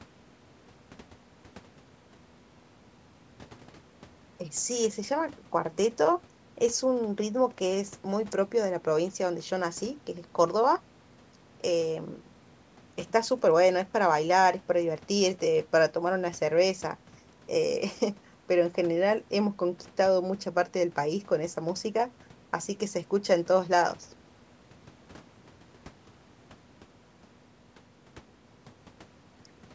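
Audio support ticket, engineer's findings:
No faults found in recording.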